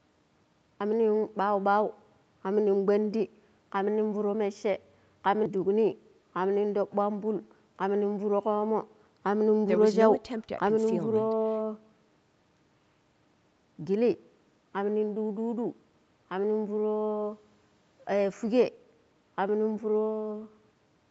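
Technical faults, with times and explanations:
No faults found; the speech carries nothing above 8 kHz, consistent with call microphone processing followed by a WebRTC call path that points to an Opus codec at that bandwidth.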